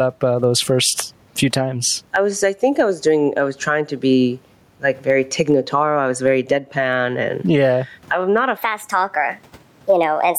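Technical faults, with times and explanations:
Throughout, gain pumping: the gain swings about 15 dB, pulled down on each loud sound so loud and soft parts sit closer and the sound is squashed, likely a fast limiter reining in far-too-hot gain.
8.57 to 10.39 s, section at the wrong speed: after "yeah I'm not a" it runs 1.27 times fast, about four semitones high and hurried, likely a mismatched clock.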